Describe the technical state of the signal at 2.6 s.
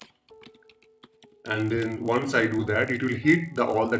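At 2.6 s a 50 Hz buzz rides on the sound, present wherever there is signal and running through the whole clip. It comes from a resampler restarted on every block: each 20 ms block was converted on its own, likely from 48 kHz down to 16 kHz, leaving a small error at every block edge.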